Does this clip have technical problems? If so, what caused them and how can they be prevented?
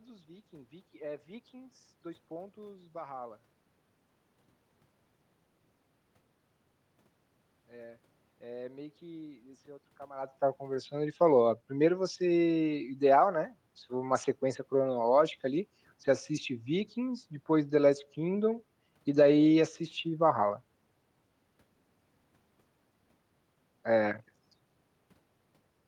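No technical problems are audible.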